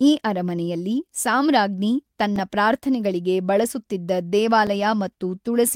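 At 1.24 s, just after "ಈ ಅರಮನೆಯಲ್ಲಿ", the speech drops into a block of digital silence about 1.3 ms long, then again at 2.36 s after "ಈ ಅರಮನೆಯಲ್ಲಿ ಸಾಮ್ರಾಜ್ಞಿ" (4 ms), at 3.69 s (2.7 ms) and at 4.67 s (5.3 ms). Each time the output buffer likely went unfilled and was zeroed, so the sound cuts abruptly with no fade and is heard as a tick or tiny pop. On the waveform each shows as a flat line with sharp edges. On a spectrogram it appears as a thin vertical broadband stripe. The lengths fit blocks of 64, 128 and 256 samples at 48 kHz.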